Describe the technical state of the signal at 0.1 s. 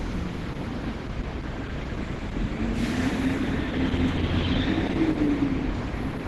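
At 0.1 s you're hearing Opus compression, and it runs through the whole clip. Nothing gets past 12.1 kHz, and the sound comes across muffled, hoarse and grainy, likely from the encoder dropping into its hybrid speech mode at a starved rate around 16 kbps.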